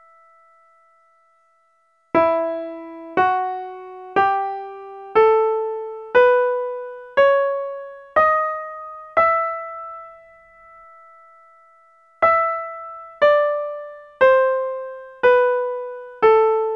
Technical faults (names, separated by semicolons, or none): none